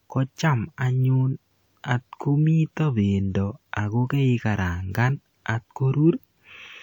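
No technical faults can be heard in this speech recording.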